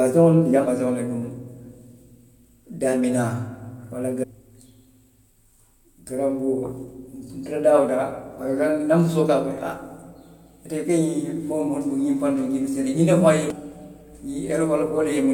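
Damaged data in a compressed stream breaks the speech five times. Corrupted bytes make the decoder misread frames, lose sync and hunt for the next valid header. Each event is a short chirp, squawk, click or hole cutting across the speech, at 0.66 s, from 4.22 to 4.24 s, from 8.66 to 8.69 s, at 11.18 s and at 13.50 s. None lasts more than about 30 milliseconds.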